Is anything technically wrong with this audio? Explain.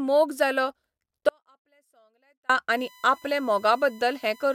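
Yes, there are two faults. From 1.29 to 2.49 s there is an audio dropout to a faint residue, likely a broken signal path upstream while the later stages stayed live. The speech cuts abruptly for 1.2 s, leaving only faint sound around 40 dB down. From 2.77 s to the end, a USB whine appears: the bus's 1 ms frame activity leaks through power or ground, adding a steady 1 kHz tone about 30 dB below the speech.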